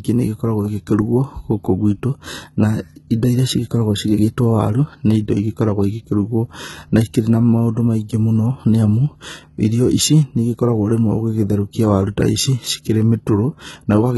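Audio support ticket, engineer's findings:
Speech treble gritty and lisping on s sounds throughout. Bright but synthetic top band, nothing above 11.8 kHz. Likely HE-AAC compression, v2, at a heavy setting fitting roughly 16 kbps. Upper band copied from lower bands; harmonics misaligned across crossover.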